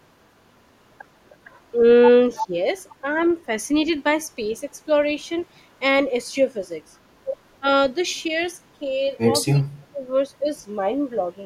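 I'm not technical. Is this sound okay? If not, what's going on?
No, not quite. Around 2.35 to 2.47 s there's an echo leak: a fairly strong copy of the speech comes back about a third of a second late, likely because the far end's echo canceller missed some of its loudspeaker sound. A much fainter one follows at 3.18 to 3.24 s.

There's also speech suppressed in double talk: when both sides overlap, the speech likely gets turned down. There's a slight dip at 2.47 to 2.53 s, a clearer one at 7.6 to 7.65 s, and at 9.54 to 10.04 s it almost drops out.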